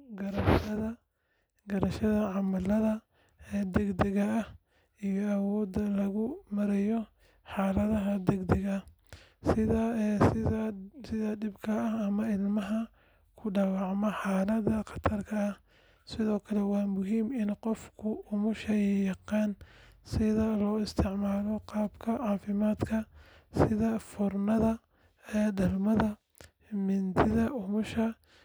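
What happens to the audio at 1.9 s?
At 1.9 s the speech continues intact, with no dropout, click, distortion or other fault.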